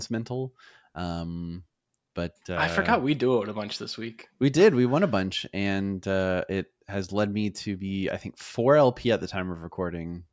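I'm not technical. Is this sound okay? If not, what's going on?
Yes, it's fine; there's nothing wrong to hear.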